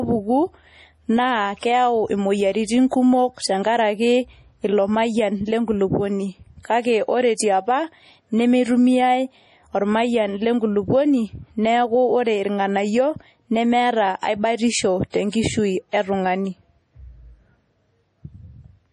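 MP3 compression runs throughout this speech recording. Nothing remains above 11.4 kHz, and the heavy watery, swirling damage comes from weak frequency lines dropping in and out between frames, likely from an MP3 encoder starved of bits, which fits a low bitrate around 32 kbps. Pre-echo appears at 1.59, 14.19, 15.10 and 15.29 s. A short hiss of about 36 to 39 ms leads each sharp onset, because the codec spreads quantisation noise meant for the loud attack across its whole block, into the quiet just before it.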